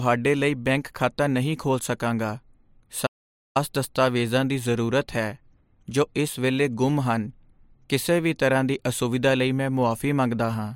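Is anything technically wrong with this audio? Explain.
Yes, there's an audio dropout to silence in this speech. From about 3.07 s to 3.56 s, roughly half a second (487 ms), the sound cuts out mid-flow into dead silence, with no room tone at all, then comes back in on "ਦਸਤਾਵੇਜ਼ਾਂ ਦੀ". That pattern points to the input being lost while the recorder kept writing silence, likely a disconnected device, a failed link or a stray mute. Whatever was said in that gap is simply gone.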